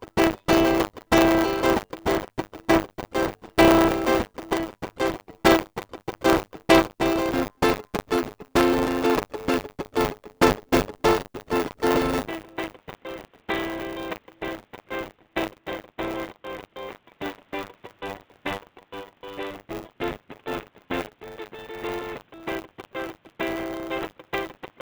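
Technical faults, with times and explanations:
Throughout, buffer tearing: the music carries a steady robotic rattle at 100 Hz that only appears while there's signal. The writer and the reader of the ring buffer have slipped, so about a tenth of each buffer replays audio roughly 40 ms stale, with hard joins on both sides.
12.28 s to the end, input switched to a poorer device (likely): the music abruptly goes dull and boxy, drops roughly 10 dB in level, and picks up a faint new noise floor well under the music, with no gap at the changeover.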